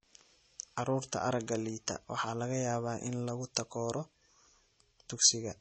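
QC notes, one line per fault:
Throughout, MP3 compression: likely an MP3 encoder starved of bits, which cuts the bandwidth so nothing survives above 8.3 kHz and lets weak frequency lines switch on and off between frames. The speech sounds dull, watery and swirly, plainly damaged, which fits about 32 kbps.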